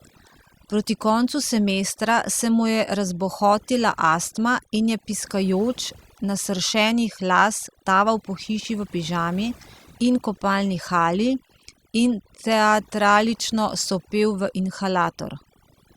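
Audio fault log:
Throughout: overdone noise removal. The denoiser's set too hard, dropping bands near the noise floor, so quiet parts of the speech go with them over a lowered, twinkly background.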